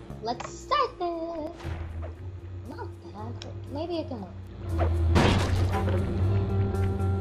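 Two blocks of digital silence, about 5 ms each, at 1.47 s and 2.71 s, where the sound cuts out with no fade and is heard as a tick or dip.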